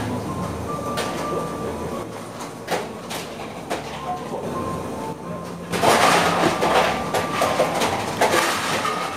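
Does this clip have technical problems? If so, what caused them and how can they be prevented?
Yes. One channel drops out at 2.03–4.43 s, 5.13–5.71 s and 8.39–9.17 s: the sound falls abruptly by about 6 dB, likely because one stereo side vanished before the mono sum. Prevent it by securing stereo cables and connectors and monitoring both channel meters while recording.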